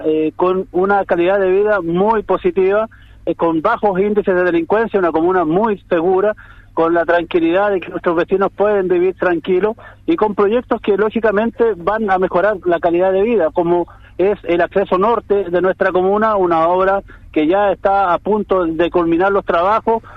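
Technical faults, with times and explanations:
No technical faults can be heard anywhere in this audio. There is nothing to mark at any point in the recording.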